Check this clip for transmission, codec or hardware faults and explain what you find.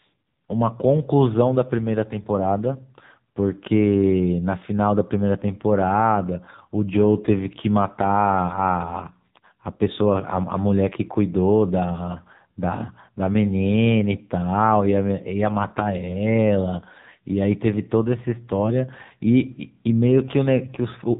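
The clip carries one codec fault, present throughout the whole speech recording.

AMR narrowband mobile codec, throughout: the speech was squeezed through the 2G/3G mobile speech codec, which rebuilds the voice from a vocal-tract model and a sparse pulse excitation. Nothing passes above 3.8 kHz, leaving a muffled, telephone-like band. The heavy buzzy, synthetic roughness fits a low mode of about 6.7 kbps.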